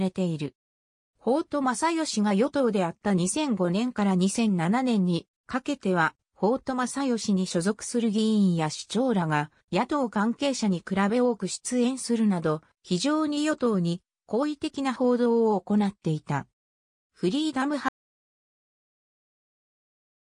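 An audio dropout to silence begins at 17.89 s and runs to the end of the clip, roughly the last 2.4 seconds. The sound stops abruptly mid-flow and is replaced by silence, with no room tone or background hiss underneath. The likely cause is a lost input, such as a disconnected device, a broken link or an accidental mute, while recording carried on writing silence, so whatever followed is gone.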